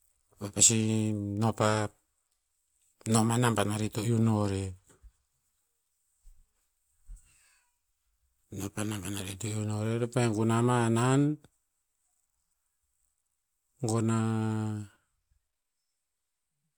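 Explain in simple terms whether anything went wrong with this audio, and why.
Nothing went wrong; the recording sounds as intended.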